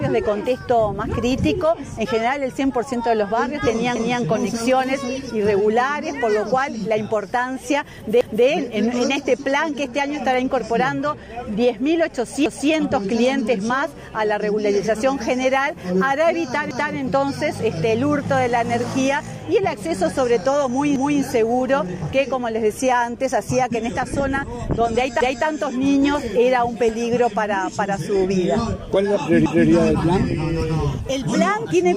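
A quarter-second stutter repeats at 3.96, 8.21, 12.46, 16.71, 20.96, 25.21 and 29.46 s, where 250 ms of sound plays twice. These are overlapping chunks: each 4 s chunk starts before the previous one ends, duplicating that stretch at every join.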